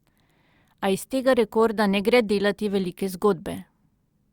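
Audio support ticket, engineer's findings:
No fault found on listening to the speech recording. No audible symptom to trace to any component in the chain.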